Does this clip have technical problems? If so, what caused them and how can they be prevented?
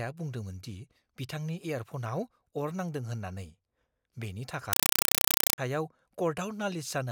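Yes. From 4.73 to 5.58 s a compressed stream was played as audio: an undecoded AC-3 bitstream was treated as ordinary samples. The speech is replaced by very loud, chattering static, 4 ms noise bursts repeating 31.25 times a second, with silent padding between them. This pattern fits a 192 kbps Dolby Digital stream. To prevent it, make sure the receiving device decodes the bitstream, or set the source to send PCM over the digital link.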